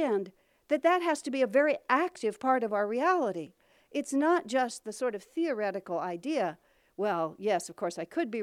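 No technical faults can be heard anywhere in the speech recording. There is no event in the audio that needs a timestamp.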